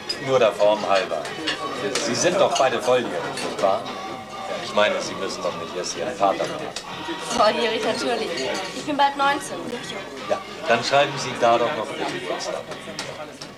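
A wireless link that likely suffered a Bluetooth stall twice: packets were held up, the receiving buffer ran empty, and playback halted until the delayed data arrived. In the sound this comes through as two abrupt dropouts to silence, at 7.38 s lasting about 10 ms and at 9.71 s lasting about 12 ms, before the audio resumes.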